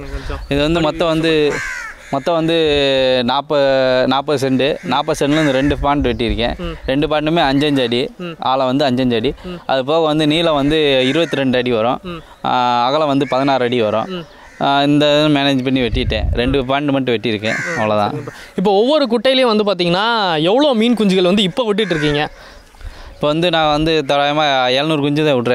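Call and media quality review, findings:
No audible faults found across the recording.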